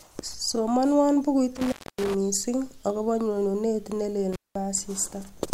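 Around 1.56 to 2.15 s, the speech drops out with a crackly edge on each side, leaving faint hiss for roughly 0.27 s. That's an intermittent contact, a loose plug or cable briefly opening. It happens again from 4.33 to 4.55 s, open about 0.2 s.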